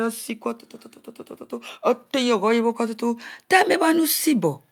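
From 2.11 to 4.54 s the automatic gain rises: the control judged the speech too quiet and crept up about 5 dB, lifting voice and background together.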